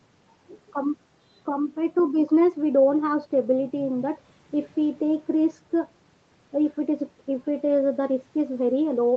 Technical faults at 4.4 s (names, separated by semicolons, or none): none